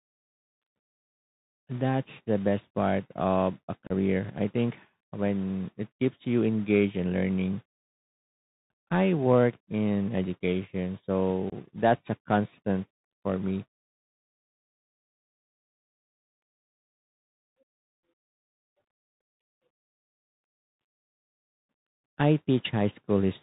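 The whole recording has passed through the Bluetooth CVSD headset codec, which fits a 64 kbps narrowband link. Each sample is coded as a single up or down step. Nothing above 4 kHz survives. S sounds turn scratchy, and a granular hiss runs under the speech.

At 3.87 s there is unconcealed Bluetooth headset packet loss. About 30 ms of audio vanishes, a few packets' worth. Nothing fills the gap, so the speech drops out with hard edges. At 11.50 s a second gap of about 22.5 ms does the same. In both places the speech returns quieter for a moment.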